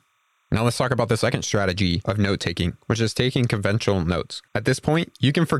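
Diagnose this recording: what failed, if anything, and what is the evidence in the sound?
The failure's in the analogue wiring: timecode bleed. Underneath the speech, for the whole clip, there's a faint chirping warble flipping between tones around 1 and 2 kHz. It sits very low, roughly 45 dB under the signal, and repeats at 30 frames per second. That's linear timecode, a square wave whose pitch doubles as the bits change, leaking in from a neighbouring track or cable through crosstalk or a shared ground.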